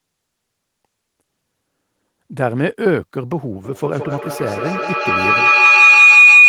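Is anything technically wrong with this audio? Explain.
Yes, there's feedback howl from 3.64 s to the end at 6.49 s. Two devices in the same room are looping mic to speaker, gaining each trip, so it narrows to a shrill tone around 3 kHz, with the loop repeating roughly every 150 ms and peaking about 11 dB above the speech.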